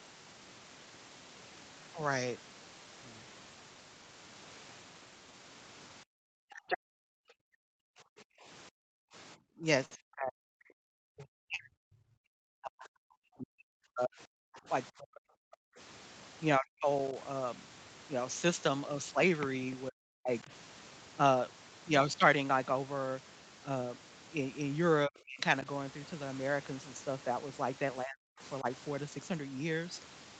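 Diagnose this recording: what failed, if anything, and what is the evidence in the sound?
Call processing, at the echo canceller: speech suppressed in double talk, likely caused by the far end talking over this talker. The longest stretch runs from 6.03 to 15.79 s, with shorter ones at 16.58–17.15, 19.89–20.51, 25.07–25.65 and 28.03–28.65 s. The speech drops by as much as roughly 40 dB. The audio resumes intact, unlike packet loss, which leaves gaps with glitches.

Call processing again: the other side's voice leaking through from 6.53 to 6.78 s, likely because the echo canceller left loudspeaker pickup in the microphone signal. The intruding voice sits only a little below the talker's level. It is a separate voice, not a doubling of the talker, which sets it apart from room reverberation.

Network and jitter buffer: two short stalls from late packets. The sound is held for 58 ms around 9.85–9.94 s and for 34 ms around 11.56–11.62 s, each with a slight buzz or dip, and speech continues from the same point. 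Nothing is skipped, which distinguishes these stalls from concealed packet loss.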